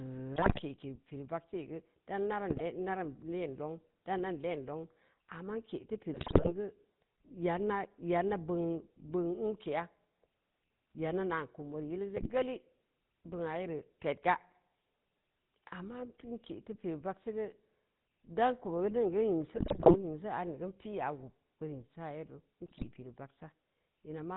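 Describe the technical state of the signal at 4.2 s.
GSM full-rate codec damage is present at 4.2 s and runs through the whole speech clip. The voice is rebuilt from a vocal-tract model excited by sparse regular pulses, consistent with a 13 kbps stream, leaving a plainly audible buzzy, gravelly roughness, and nothing above 4 kHz survives.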